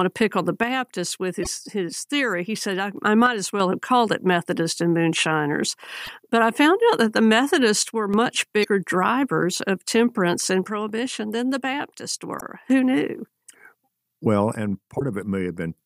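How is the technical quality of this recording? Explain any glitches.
The recording has two recurring technical faults in the speech.

One channel drops out at 0.63–2.97, 3.26–3.60, 7.83–8.14, 10.67–12.70 and 14.55–15.78 s. One stereo side is likely being lost, so after summing to mono, the speech abruptly falls by about 6 dB, then returns to full level.

Damaged data in a compressed stream appears at 1.41–1.47, 6.01–6.09, 8.61–8.65, 12.37–12.42 and 14.97–15.02 s. Corrupted bytes make the decoder misread frames and lose sync until the next header, producing brief chirps, squawks, clicks or short holes lasting roughly 40–80 ms.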